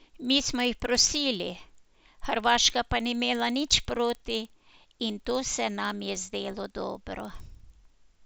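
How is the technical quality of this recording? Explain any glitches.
The recording has one persistent glitch running under the speech from start to finish. Resampler restarted on every block, throughout: the 16 kHz audio was converted to 48 kHz in separate 50 ms chunks, each edge computed without its true neighbours. That leaves a small error every block, heard as a 20 Hz buzz or ticking that rides on the speech and drops away in pauses.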